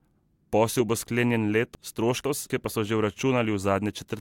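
Speech with a chunks out of order fault between 1.75 and 2.5 s, just after "bo sklenjen" and before "pa so že". A 250 ms block of audio was delivered or written two chunk positions late, so it plays after the two blocks that should follow it. No audio is missing, but the sequence within that three-quarter-second span is scrambled, giving a jumbled stretch with three hard joins.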